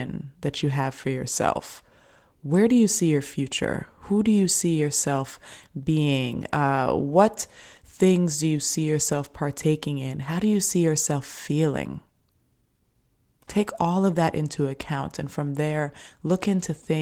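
No technical faults are audible in this speech.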